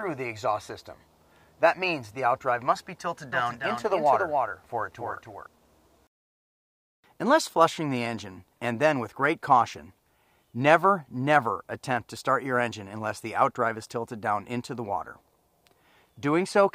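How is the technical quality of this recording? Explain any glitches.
There is one glitch, a doubled audio track, from 3.32 s to 5.46 s. For those two seconds a second copy of the sound plays alongside the first. It trails by about 300 ms and sits about 5 dB lower. The copy is full-band and dry, with no decay or room colour. It starts and stops abruptly. The likely cause is the same signal reaching the mix twice, once through a slower path.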